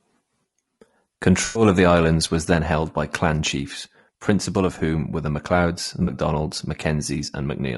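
Speech, likely passed through low-delay AAC compression (AAC-ELD) at a bitrate that sounds around 32 kbps, whose short frames blur pitch harmonics, leaving the voice plainly rough and grainy throughout. AAC frame loss with concealment occurs at 1.45–1.63 s and 6.03–6.09 s, where the decoder patches roughly 100 ms and 40 ms gaps from earlier spectrum, producing smeared, noisy patches.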